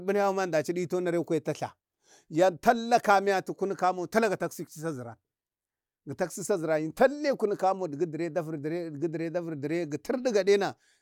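No technical faults can be heard anywhere in the recording.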